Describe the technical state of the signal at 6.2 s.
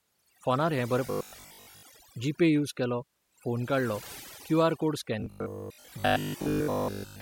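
At 6.2 s, two faults overlap. The first is overdone noise removal, present across the whole clip. The noise reducer cuts individual frequency bands whenever they sit close to its noise estimate. Quieter parts of the speech vanish along with the noise. The background drops and breaks up into small twinkling artefacts.

The second is robotic sound from repeated short buffers, running from 5.20 s to 7.20 s. The speech turns into a stiff metallic buzz at 50 Hz that still roughly tracks the syllables. The likely cause is audio arriving too late. The gaps get filled by looping the last chunk, about 20 ms long. For most of that span, repeats replace the real signal, and the fixed loop length forces that steady pitch.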